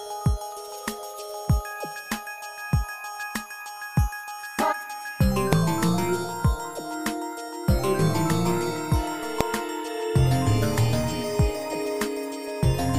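At 5.53 s and again at 9.41 s there is a single sharp bang, each caused by invalid numbers at full scale: a calculation went infinite or undefined, and those values were pinned to the maximum level for a block of about 0.67 ms, which fits a 32-sample block. Because the block is so brief, each event lands as one bang. A waveform shows a thin spike far beyond the audio's peaks, and a spectrogram shows a full-height vertical line.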